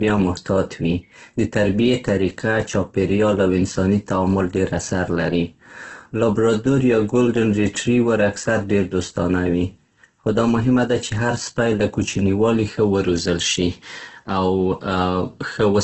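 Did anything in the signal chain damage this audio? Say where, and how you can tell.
Yes, at the codec stage. The speech sounds rough and grainy throughout, with nothing above about 8.2 kHz. This is likely Opus compression. Starved of bits, the encoder fills bands with noise instead of detail. The narrowed band fits a bitrate near 12 kbps.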